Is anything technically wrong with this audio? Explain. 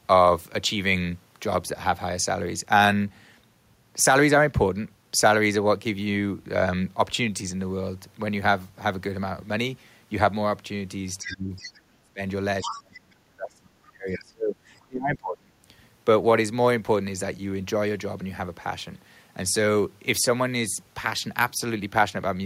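Yes. Between about 11.2 and 15.5 s the speech suffers two related problems.

Other side's voice leaking through occurs at 11.22–11.37, 11.57–11.78 and 12.68–12.99 s. A second voice sits faintly under the talker, roughly 10 to 20 dB below the speech and loudest in the last scrap. The likely cause is loudspeaker sound reaching the microphone that the echo canceller failed to subtract. On a spectrogram it shows as a weaker, separate harmonic pattern overlapping the main one.

Speech suppressed in double talk occurs at 11.22–11.52, 11.82–12.20, 12.61–14.57 and 14.86–15.54 s. The talker's level sinks sharply, by up to about 30 to 35 dB in the deeper drops, and the longest stretch lasts about two seconds. This is likely the canceller clamping down on everything while both sides spoke at once. On a waveform the envelope collapses into gouged gaps.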